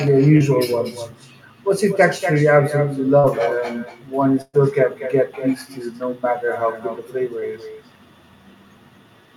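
Echo with no canceller runs through the whole recording. The far end's loudspeaker feeds its microphone and nothing subtracts it, so every phrase returns about a fifth of a second later, about 12 dB down and thinner.

Short concealed packet loss occurs at 0.37–0.48 s, 3.19–3.25 s and 7.39–7.43 s. Chunks of 20 to 40 ms never arrived in time, and the decoder extended the preceding sound to bridge them. Each is a brief smear or wobble, and the first also drops a few milliseconds outright.

A burst of packet loss hits at 4.41–4.55 s. About 120 ms of consecutive audio was lost, and the receiver stretched the last sound while fading it, giving a held sound that sinks to a short silence of about 20 ms before the audio picks up further on.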